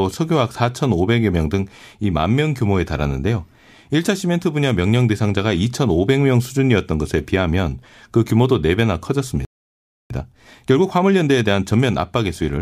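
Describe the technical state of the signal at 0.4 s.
At 0.4 s the speech signal is intact, with no audible fault at that moment.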